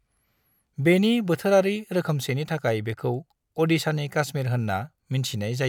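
No technical faults are audible anywhere in the speech recording.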